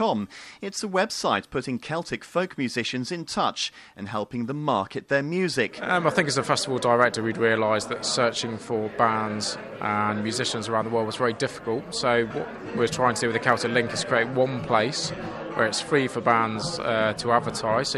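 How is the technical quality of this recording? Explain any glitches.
There is one glitch, a single click at 13.53 s. It is most likely dropped samples: a fraction of a millisecond of audio went missing, so the waveform jumps abruptly to a later value. That step is heard as one sharp tick and appears on a spectrogram as a thin vertical line spanning all frequencies.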